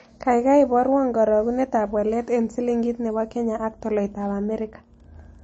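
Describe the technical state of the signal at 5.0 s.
At 5.0 s the speech is dull and watery. Nothing reaches above 8.3 kHz. Weak detail seems to flicker in and out, and consonant attacks smear. This is likely MP3 compression, running the whole clip. The damage fits a low bitrate around 32 kbps. The encoder cuts the treble at a fixed point and drops quiet frequency lines that don't fit the budget. Those lines switch on and off between frames, which gives the swirly texture.

Wi-Fi interference is also present at 5.0 s. It begins at 3.65 s, right after "silingit ne po kenya", and lasts to the end. A nearby radio's beacon is rectified by the audio circuit. It repeats every 102.4 ms, so it is heard as a steady tick about ten times a second. The ticking is very faint, roughly 50 dB below the speech.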